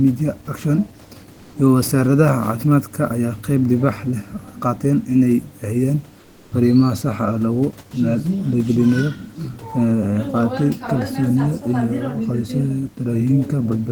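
At 6.19 s the speech pauses, and the room noise, about 32 dB below the speech, gives way to comfort noise in place of the background. This lasts 320 ms, until 6.51 s. The real background loses its detail and turns into a steady, featureless hiss, about 2 dB quieter. The likely cause is discontinuous transmission in the Opus codec. The sender stopped sending during the silence, and the receiver filled the gap with synthetic noise.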